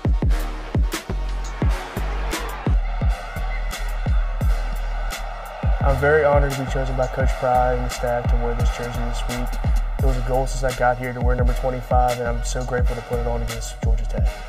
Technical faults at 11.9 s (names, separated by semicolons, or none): channel delay (comb filtering)